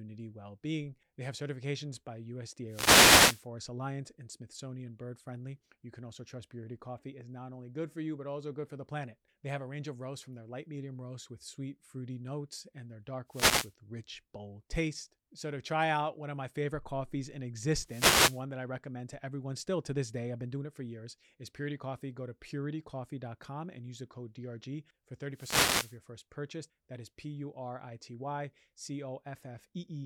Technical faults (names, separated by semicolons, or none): wireless microphone noise hit